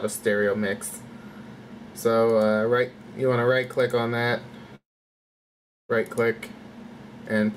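A long network dropout runs from 4.75 to 5.92 s. The audio breaks off and the last sound is briefly carried on as a fading buzz, then gives way to about 1.07 s of silence. When the audio returns at 5.92 s, roughly 1.14 s of material is simply gone rather than delayed. This likely comes from a stretch where no packets reached the receiver, whose concealment could only extend the final sound before going quiet.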